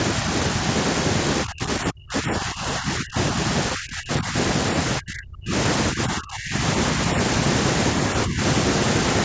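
From 1.44 to 3.17 s, the speech dips hard. It happens again at 3.74 to 4.35 s, 4.98 to 5.53 s, 5.91 to 6.62 s, and briefly at 8.25 to 8.41 s. This is speech suppressed in double talk. The likely cause is an echo canceller that could not tell this talker from the other side's echo, so it turned both down. The deepest cuts reach about 35 to 40 dB. The last one is only about 10 dB.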